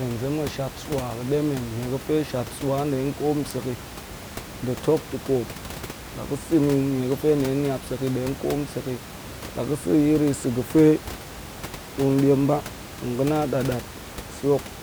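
Nothing goes wrong anywhere in this speech recording, and the only thing in the background is a bit of room noise sitting about 14 dB under the talking, which just comes with the space the microphone was in.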